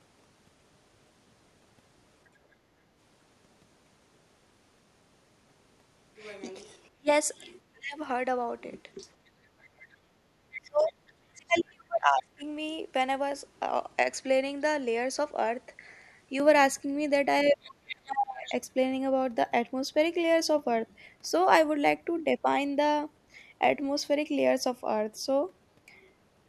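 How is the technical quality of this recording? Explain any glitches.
The recording has clear echo-canceller trouble in three spots, all around moments when both ends of the call were talking at once.

Speech suppressed in double talk shows up at 6.89 to 8.0 s, 10.59 to 12.43 s and 17.44 to 18.52 s. The talker's speech sinks by something like 30 to 35 dB at its worst, adding up to about a second and a half in the middle stretch. The likely cause is the canceller mistaking the overlapping speech for loudspeaker echo and ducking everything.

The other side's voice leaking through comes in at 7.36 to 7.52 s as a faint scrap, far down under the speech. It's much more obvious from 8.97 to 11.63 s and again from 17.65 to 18.54 s, at roughly 15 dB below the talker, so you can actually hear a second voice in the background. That's likely loudspeaker playback getting into the mic and not being fully cancelled. 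Those leaks overlap the ducked sections, so in those moments the talker is turned down while the far end bleeds in.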